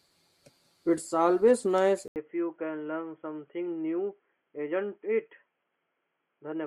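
From 2.08 s, likely an input switched to a poorer device: an 80 ms waveform gap, then duller, quieter speech, spectrogram empty above 3.3 kHz.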